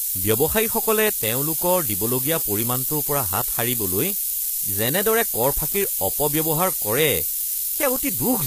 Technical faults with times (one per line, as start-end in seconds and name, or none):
0.00-8.46 low bit depth with noise shaping
0.00-8.46 HE-AAC compression